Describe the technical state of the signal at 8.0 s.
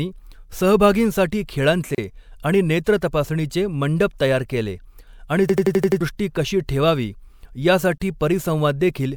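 At 8.0 s there is a gap at a join of encoded pieces, from 7.98 to 8.00 s: about 24 ms of silence cuts into the running speech with smeared edges. Separately encoded segments were spliced without trimming encoder delay and padding; the joins recur every 6 s.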